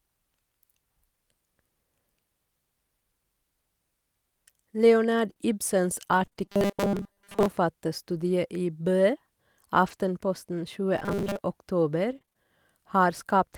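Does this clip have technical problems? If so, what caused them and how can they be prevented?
Yes. Between 5.29 and 12.45 s the speech carries brief ticks, small smears and hiccups, roughly ten of them, none longer than about 20 ms. These are scattered short gaps: audio packets arrived late or not at all, and the receiver covered each small hole by extending the sound just before it. Those patches take up only about 2% of that stretch. A larger jitter buffer and a steadier network path, or forward error correction, would prevent this.

From 6.46 to 7.48 s, and again from 10.98 to 11.44 s, the speech turns into a rigid, metallic buzz at 200 Hz that still loosely tracks the words. This robotic sound from repeated short buffers is likely caused by fresh audio arriving too rarely, so the software kept replaying a tiny slice, which fits a 5 ms buffer. Roughly 70% of each stretch is repetition rather than real audio. 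Giving the audio thread higher priority or using larger buffers would prevent it.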